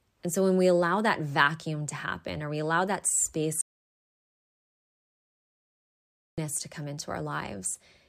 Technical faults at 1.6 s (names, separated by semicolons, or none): none